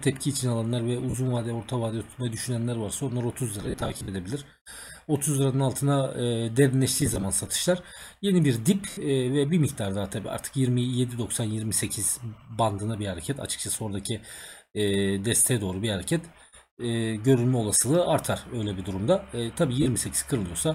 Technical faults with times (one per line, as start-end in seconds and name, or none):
1.10-1.15 lost LE Audio frames
3.62-4.09 lost LE Audio frames
7.01-7.24 lost LE Audio frames
8.90-8.97 lost LE Audio frames
19.82-19.86 lost LE Audio frames